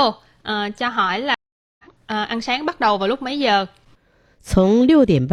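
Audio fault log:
1.34–1.84 s, stream reconnect: the speech stops for 445 ms while the player rebuilds the connection, then a fresh decoder picks up with a brief fade-in. Unlike a plain dropout, it resumes about a fifth of a second later, skipping material.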